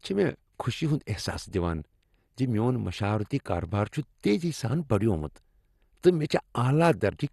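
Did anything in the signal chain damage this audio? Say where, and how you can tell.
Yes, at the codec stage, likely MP2 compression. Throughout the speech, nothing survives above 12.2 kHz, and the remaining upper bands flicker with a gurgling, granular roughness, which fits about 64 kbps. A plain low-pass filter would sound dull but stay clean, without this grain.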